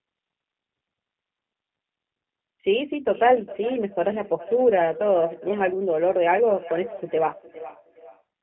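Throughout, the speech passes through the G.729 codec, whose filter-and-pulse model fits an 8 kbit/s call line. Nothing above about 3.4 kHz survives, and the speech sounds rough and synthetic. From 3.01 s to 8.26 s, feedback echo between two devices loops one device's playback back into the other's microphone, so the speech returns thinner roughly every 0.4 s, at most about 15 dB below the speech.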